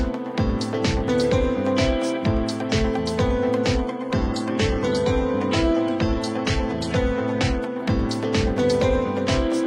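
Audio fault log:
3.79–7.79 s: adaptive stream at a lower bitrate. The treble abruptly stops above 11.9 kHz, suggesting a low-rate fallback stream, then returns without any gap.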